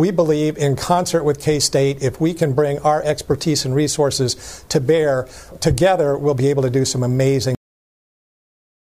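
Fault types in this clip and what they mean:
Cut-off end: the final stretch of audio was never written out or played, so the recording ends on data that was lost rather than on a natural finish. At 7.55 s the sound stops in the middle of itself and falls straight to digital silence, with no decay or fade. That silence then runs to the end of the file, about 1.3 seconds of nothing where the remaining sound should have been.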